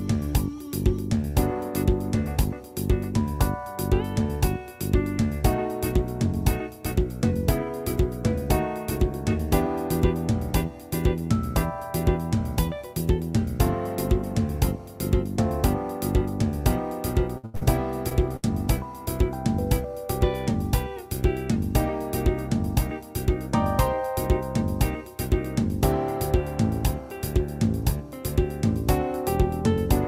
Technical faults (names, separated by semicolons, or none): burst of packet loss; short concealed packet loss